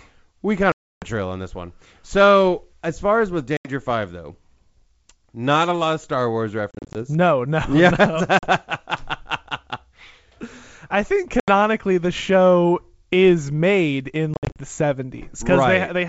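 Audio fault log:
0.72–1.06, 3.57–3.70, 6.71–6.98, 8.39–8.50, 11.40–11.50, 14.34–14.58 s: packet loss on an ADPCM call. Sudden silent gaps of 40 to 300 ms, broken up at 6.71 and 14.34 s. The receiving decoder's predictor and step size drift from the sender's, so the speech returns slightly distorted.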